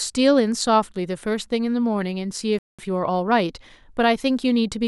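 The player most likely ran short of data or had its output thread blocked at 2.59 s, producing a playback stall. Nothing reached the output until 2.79 s, so the speech cuts off in mid-flow and leaves a gap of about 200 ms before it resumes. The break is long enough to register as the audio freezing rather than as a natural pause.

Once output resumed at 2.79 s, the player began time-compressed catch-up to work off the backlog the stall had built up. It trims small slices out of the signal and cross-fades across each cut, which runs the speech at about 1.15 times normal speed until 4.11 s. The pitch stays where it was, but the delivery sounds hurried over that stretch of about 1.3 seconds.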